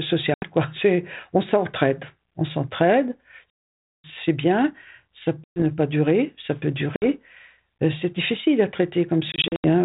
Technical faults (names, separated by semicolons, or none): packet loss on an ADPCM call